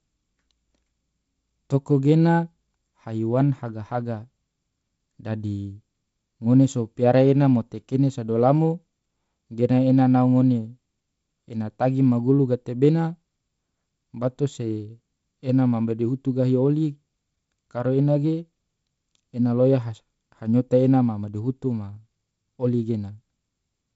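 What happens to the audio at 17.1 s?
Nothing goes wrong at 17.1 s: the speech carries on intact through that moment, with only the light hiss and the top limit of about 7.7 kHz that the 48 kbit/s G.722 wideband telephone coding gives the whole clip.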